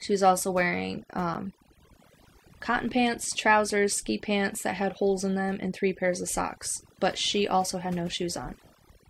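Throughout, the speech plays against near silence dotted with twinkling specks. This is overdone noise removal, which cut frequency bands near its noise estimate along with quieter parts of the voice. At 1.34 s, after "was also wearing", a tick marks a 10.7 ms block of digital silence, which fits a 512-sample buffer that was not filled in time. Ticks at 2.89 s, before "pants trousers ski pants", and at 8.19 s, after "she also had no", are 2.7 ms gaps, which fit 128-sample blocks.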